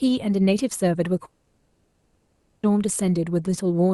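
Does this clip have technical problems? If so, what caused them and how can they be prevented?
Yes. From 1.25 s to 2.65 s, the speech gives way to a buzzy, smeared continuation of the last sound. When speech returns, about 1.4 s of it is gone. This is likely a long network dropout, with concealment filling the gap. A steadier connection and forward error correction help prevent it.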